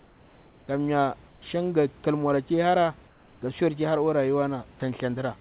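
Comfort noise replaces the background from 0.00 to 0.68 s, 1.28 to 1.42 s and 3.08 to 3.42 s. The pauses turn steady and featureless, about 2 to 4 dB quieter, likely through discontinuous transmission.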